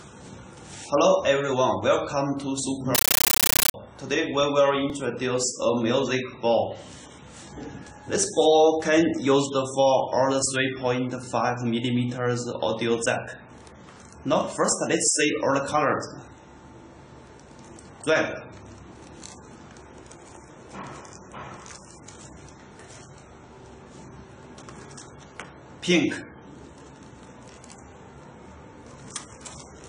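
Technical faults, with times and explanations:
2.95–3.74 s, compressed stream played as audio: harsh, loud chattering static of 13.3 ms noise bursts repeating at 31.25 Hz, consistent with undecoded AC-3 data read as samples.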